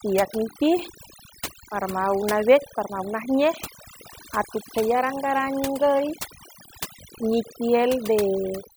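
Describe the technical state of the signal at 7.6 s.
At 7.6 s the background has dropped and breaks up into twinkling, warbling specks. This is overdone noise removal, present throughout the clip: a noise reducer set too strong switches off frequency bands near its noise estimate, taking quiet speech detail with them.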